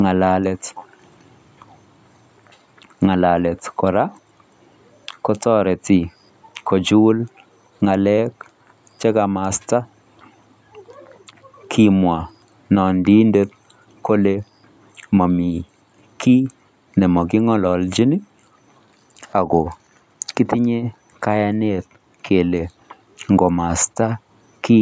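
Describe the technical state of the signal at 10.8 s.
At 10.8 s the speech signal is intact, passing through the call microphone processing as expected, with its content ending at 8 kHz and no fault present at that moment.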